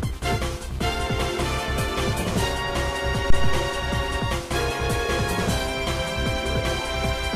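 At 3.30 s a deep, low thump rises to about -6 dBFS, dies away over roughly 93 ms, and lingers faintly until 3.71 s. This is a phantom power thump: a supply switched on or off on a live input sent a voltage step through the coupling capacitors.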